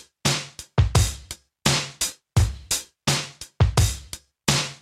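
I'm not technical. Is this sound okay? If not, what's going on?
Yes, it's fine: nothing in it sounds broken or out of place, so you can relax about this one.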